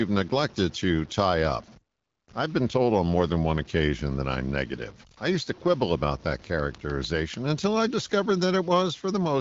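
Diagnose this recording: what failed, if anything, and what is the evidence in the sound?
The sample-format conversion likely truncated the audio to about 7 bits without dither, which is low bit depth without dither. The speech carries grainy distortion that tracks its level throughout, roughly 25 dB below the signal, and the quietest stretches turn gritty or sputter.

A train of clicks runs from 6.29 s to 7.95 s: about ten near-identical pulses at a regular 6.7 per second, peaking about 5 dB above the speech level. The evenly spaced, same-shaped ticks likely come from interference or a faulty connection.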